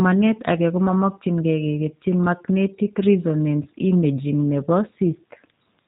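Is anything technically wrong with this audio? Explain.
Yes. Throughout the speech, G.729 codec damage is plainly audible, which fits G.729A at 8 kbit/s. Each 10 ms frame is resynthesised from a vocal tract filter, pitch predictor and a few pulses, so nothing survives above 4 kHz and the voice sounds rough and synthetic. That buzzy artificiality distinguishes it from a simple low-pass filter.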